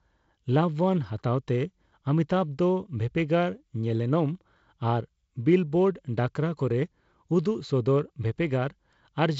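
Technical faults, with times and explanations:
No technical faults can be heard in the speech. The G.722 wideband telephone coding, running at 48 kbit/s, leaves only a light hiss from its coarsely coded bands and nothing above 7.7 kHz.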